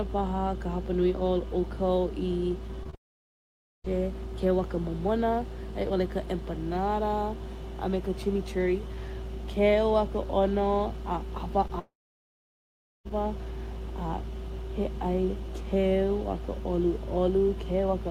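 At 2.83–2.87 s and again at 2.90–2.95 s, short concealed packet loss leaves two quick smears: about 20 ms of speech went missing each time and the decoder stretched the preceding sound across the gap. On a spectrogram these show as brief blurred patches where the harmonics flatten, with no clean break in the waveform.

From 2.95 to 3.86 s a fading buzz gives way to near-silence lasting about 0.86 s, likely a long network dropout. The waveform collapses to a flat line and the spectrogram goes blank, until speech resumes with roughly 0.9 s missing.

One more short concealed packet loss at 11.68–11.71 s leaves a similar tiny smear.

At 11.79 s what is likely the same dropout pattern returns. The concealment fades and about 1.14 s of emptiness follows before audio comes back at 13.07 s, with roughly 1.26 s lost. This appears as a wide blank band on the spectrogram.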